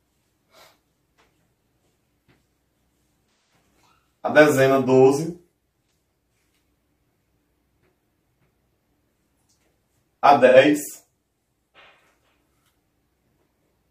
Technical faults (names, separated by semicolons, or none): AAC frame loss with concealment